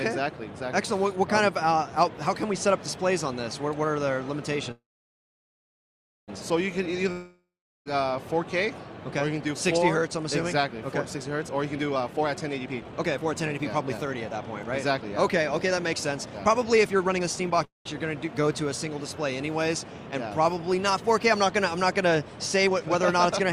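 At 4.71 s a call audio freeze begins: the last sound smears into a fading hiss, then about 1.5 s of silence until 6.30 s, when the audio resumes exactly where it stopped. This is likely packets held up until the jitter buffer ran empty. Nothing is lost, only delayed.

From 7.12 to 7.88 s a long network dropout sounds similar, with a fading tail and about 0.4 s of silence. But it resumes further on, skipping roughly 0.74 s of audio.

From 11.55 to 17.64 s a jitter buffer speed-up plays the sound at 119% speed with pitch unchanged. It trims around a second and sounds hurried rather than raised in pitch.

A brief freeze follows at 17.65–17.87 s, with about 0.16 s of silence. From 22.58 s to the end, a second speed-up runs at 115%.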